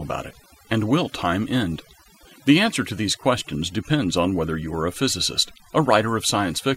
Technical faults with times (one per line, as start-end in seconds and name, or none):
0.00-6.76 overdone noise removal